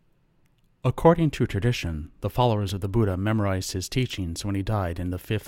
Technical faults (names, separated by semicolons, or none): none